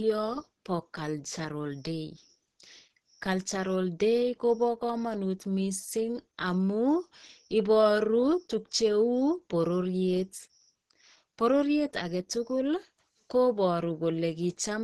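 From start to finish the speech sits under a hard ceiling, with nothing above 12.2 kHz, and carries plainly audible coding damage: a muffled, hoarse quality with grainy, noise-filled texture where finer detail should be. This is likely Opus compression running in its hybrid mode, where a speech-oriented lower band is joined to a transform-coded upper band at super-wideband bandwidth. The narrowed band and roughness fit a low bitrate of around 16 kbps.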